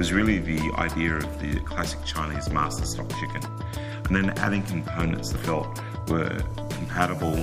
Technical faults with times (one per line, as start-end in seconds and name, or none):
5.37 compressed frames skipped